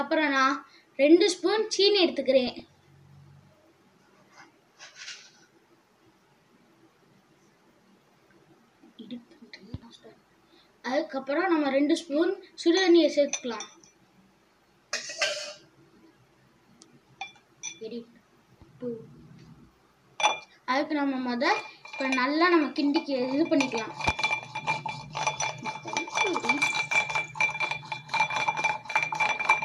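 The audio carries two short bursts of DAB burbling, from 2.47 to 2.60 s and from 11.97 to 12.00 s. Weak reception let bit errors, on the order of a tenth of a percent, slip past error correction into the MP2 data. Corrupted samples put short noise blips into single sub-bands, and corrupted scale factors throw sub-bands up or down in level for up to a frame. The first burst hit roughly a dozen damaged frames, the second a few.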